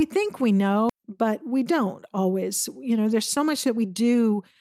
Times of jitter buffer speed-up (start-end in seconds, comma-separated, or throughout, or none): 0.99-4.22